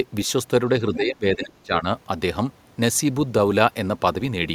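Speech with speech suppressed in double talk from 0.86 to 1.87 s, likely an echo canceller muting the near talker while both sides spoke, pulling the voice down by roughly 25 dB.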